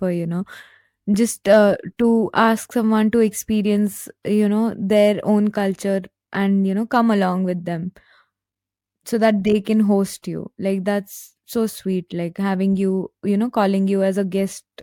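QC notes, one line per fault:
No faults found in the speech audio. Nothing here needs flagging.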